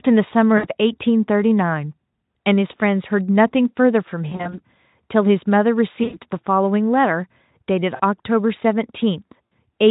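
VoIP packet loss concealed by the speech codec breaks into the speech at 0.57–0.66 s, 4.29–4.61 s, 6.03–6.18 s, 7.96–8.01 s and 9.49–9.53 s, with 40 to 100 ms missing each time. At 4.29 s the losses are scattered over 240 ms. The decoder stretches its last pitch and filter into a buzzy tone or a coloured noise that fades, and the speech stays weak until it rebuilds. A plain dropout would leave silence or a click instead. The Speex coding around these gaps adds little audible damage of its own.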